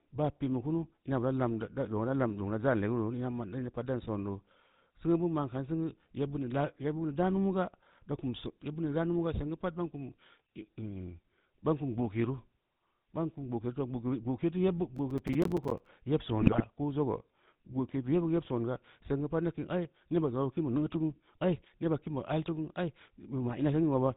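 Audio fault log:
Throughout: GSM full-rate codec. The speech carries a buzzy, gravelly roughness that is plainly audible, consistent with the original 13 kbps GSM coder. It rebuilds the voice from a vocal-tract filter driven by a sparse pulse train that keeps only one excitation sample in three, so the natural fine structure of the voice is lost. Nothing survives above 4 kHz, which leaves the sound dull and boxy as well as rough.
14.96–15.89 s: Processor overload crackle. For just under a second, a gritty tearing runs over the speech. The sound fits audio processed in small blocks of about 5 ms, with roughly thirty of those blocks missing their deadline in quick succession. Each missed block drops out as a short hard-edged stretch of silence. The many abrupt cuts merge into a crackling burst that stops as soon as the load eases.
16.40–16.61 s: GSM bit errors. For about 0.2 s the speech breaks into squawks, pops and a gargling distortion. 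The damage fits flipped bits reaching the GSM decoder at an error rate near 2.5 percent. The corrupted frames carry wrong filter, pitch and gain values, so each one comes out with a bent spectrum or a sudden jump in level. Across roughly ten consecutive 20 ms frames, these errors produce the garbled squawking.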